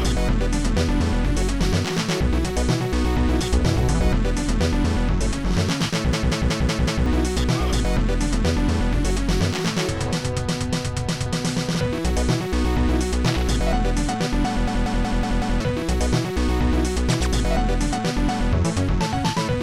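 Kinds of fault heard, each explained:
System hang loop: twice, a 186 ms fragment stutters five times at 5.4 Hz as the frozen system's hardware replays one buffer, losing roughly a second.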